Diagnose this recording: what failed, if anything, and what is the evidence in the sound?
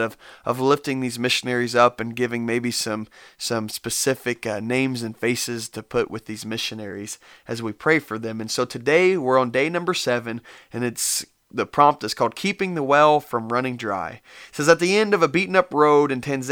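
Nothing failed here: listening across the whole speech recording, there's no stage in the chain that gives itself away, and nothing in the sound points to a problem worth chasing.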